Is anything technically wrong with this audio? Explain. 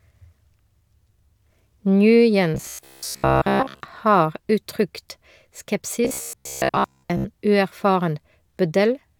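Yes. From 2.55 to 3.81 s, just before "har uttrykt", and again from 6.05 to 7.25 s, the speech turns into a rigid metallic buzz at 66.7 Hz: robotic sound from repeated short buffers, likely from a 15 ms chunk being replayed over most of the real audio.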